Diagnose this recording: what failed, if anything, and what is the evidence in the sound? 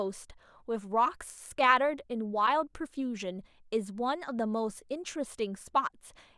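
Nothing failed: no stage in the chain, from capture through conversion, transport and playback, leaves any audible evidence anywhere in the recording.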